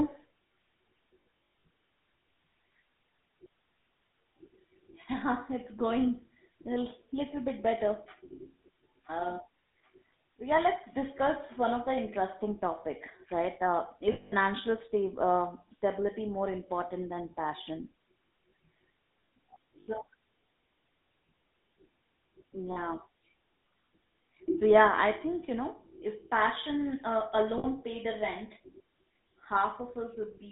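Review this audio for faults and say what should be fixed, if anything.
GSM full-rate codec, throughout the 30-second recording: the speech carries a plainly audible buzzy, gravelly roughness, which fits a 13 kbps GSM full-rate coder. That coder rebuilds the voice from a vocal-tract filter excited by a coarse, regularly spaced pulse train, and the band here runs only from 200 Hz to 3.7 kHz. Prevent it by carrying the call over a wideband codec such as AMR-WB or Opus.

Lost GSM frames occur at 1.22–1.27 s, 14.12–14.33 s, 19.80–19.89 s, 22.72–22.82 s and 27.58–27.65 s, the last between "know if passion uh" and "paid a rent". In each gap the decoder repeats the last good frame, producing a rough, metallic ring. Losses near 1.2 s total 280 ms, scattered across 440 ms with runs up to about a tenth of a second, and the 14.12 s loss lasts 200 ms. Prevent them by improving radio coverage or adding stronger channel protection.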